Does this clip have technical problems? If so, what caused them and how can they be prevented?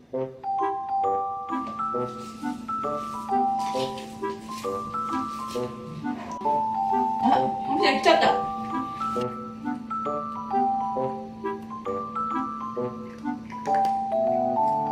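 No, nothing here points to a technical fault, so there is nothing to trace back or prevent.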